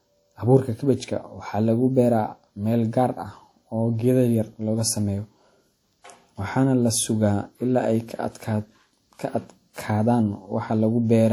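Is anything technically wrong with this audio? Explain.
Yes. Throughout the speech there is damage from WMA compression, likely the result of encoding with Windows Media Audio at a low rate, which fits a bitrate around 48 kbps. The transform codec quantises each long block coarsely, smearing its noise over tens of milliseconds and discarding weak spectral detail, with nothing above about 19.7 kHz. The plainly audible result is a ringing, washy texture and a hiss that swells and fades with the speech.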